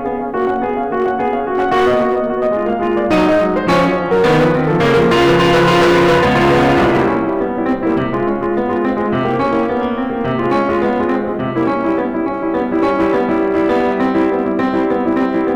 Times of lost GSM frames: none

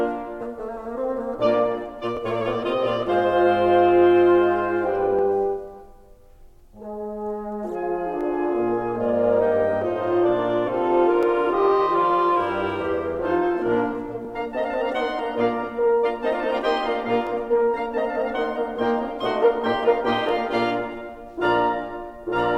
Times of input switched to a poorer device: none

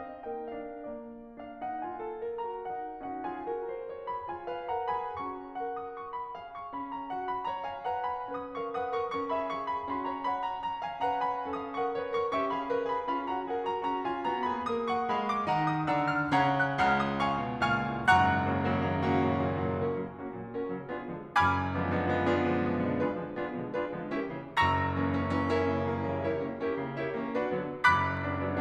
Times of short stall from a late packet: none

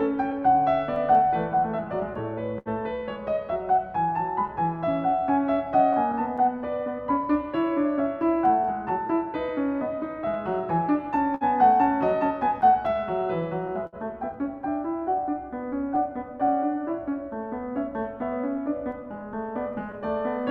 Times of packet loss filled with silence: none

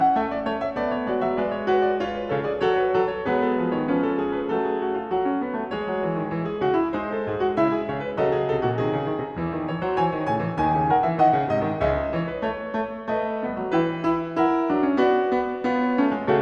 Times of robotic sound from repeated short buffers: none

